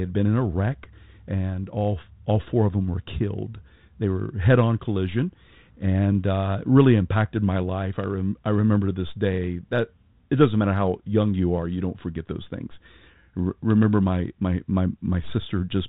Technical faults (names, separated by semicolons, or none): none